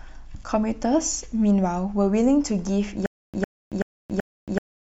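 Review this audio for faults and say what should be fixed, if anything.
From 3.06 s to the end, the speech breaks into a stutter with silent gaps. A 104 ms fragment repeats four times on a 380 ms cycle, each time followed by 276 ms of digital silence. A stalled player or stream likely replayed its last fragment at each retry and then ran empty, so the audio that belonged in that span is lost. On a waveform this appears as identical short blocks separated by flat silent stretches, and a spectrogram shows matching narrow slices with blank columns between them. Giving the stream more buffering headroom and having the player recover from stalls without replaying its last fragment would prevent it.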